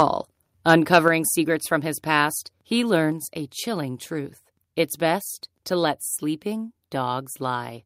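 A speech recording where, from 0.69 to 0.98 s, the loudest syllables take on a harsh, crackling, buzzy edge as their peaks flatten instead of rising cleanly. This is microphone overload, likely from the microphone's input volume being set so high that the signal pushed about 4 dB past the converter's ceiling. The tops of the waveform are sliced off, affecting roughly 2 percent of samples across that stretch, and the squared-off peaks add the gritty distortion. Just after, at 1.08 s, the whole recording, both the talker and the room behind them, abruptly becomes quieter by about 5 dB. This microphone volume stepped down event is likely the call software reacting to the preceding clipping by lowering the device's input volume in a single jump. Because the adjustment is applied at the input, the background drops along with the voice, and the change is audible as an instant step.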